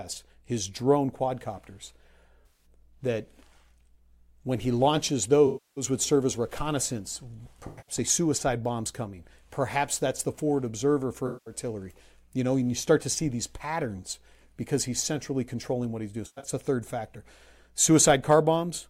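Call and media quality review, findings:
Smeared, phasey, noisy patches in the speech at 2.46–2.66 s, 5.47–5.84 s, 7.67–7.95 s, 11.27–11.54 s and 16.26–16.51 s; the 5.47 s one is longest, about 300 ms of missing audio. AAC frame loss with concealment: decoder reuses last good spectrum with scrambled phase. At 7.67 s and 16.26 s losses are scattered, longest run about a tenth of a second.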